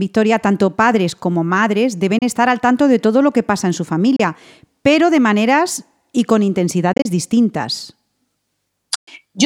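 At 2.18 s, after "tanto padres como madres", the speech cuts out for 29 ms. At 4.16 s, after "que pasa en su", another 29 ms hole opens. From 6.93 to 7.06 s, after "de maneras y con", short gaps totalling about 73 ms scatter across 116 ms. At 8.95 s a 116 ms silence falls. These are likely Bluetooth dropouts. Packets missed the headphones and the output went silent. Each time, speech resumes as if it had played on.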